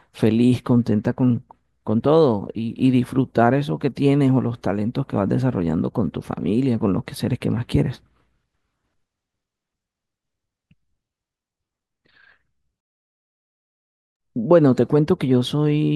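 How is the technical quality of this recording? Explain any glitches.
No audible glitches or faults.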